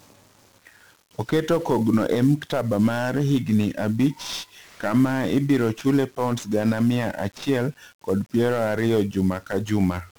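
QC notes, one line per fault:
Throughout: 1-bit DFPWM compression, heavy. The speech sounds fuzzy and crackly. Each sample is a single bit nudging an adaptive level up or down. That leaves strong broadband quantisation noise, and hiss swamps the treble. The damage fits a bitrate of around 48 kbps.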